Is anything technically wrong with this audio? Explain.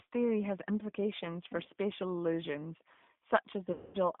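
Yes, there are two faults. Throughout the speech runs through the G.729 codec. The band is held between 150 Hz and 3.6 kHz, and the voice has the rough, slightly synthetic texture of a coder that rebuilds each 10 ms frame from a vocal tract filter, a pitch predictor and a few pulses, which fits the 8 kbit/s G.729A variant. What separates this from simple telephone band-limiting is that buzzy, reconstructed grain, which a plain filter would not add.

From 3.72 to 3.98 s there is VoIP packet loss concealed by the speech codec, covering about 220 ms, which fits a run of eleven 20 ms packets. The decoder keeps extrapolating from its last pitch and filter settings and lowers the gain each frame. The result is a stretched, buzzy tone or coloured noise that fades rather than a clean gap of silence or a click, which is how it differs from a raw dropout. Because each frame depends on the last, the voice stays weak or distorted for a while after the packets return.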